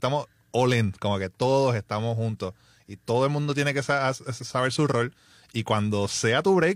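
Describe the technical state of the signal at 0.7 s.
At 0.7 s the speech signal is intact, with no technical fault present at that moment.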